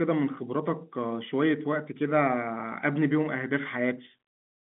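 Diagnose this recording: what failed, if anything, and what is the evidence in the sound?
Nothing failed in this recording.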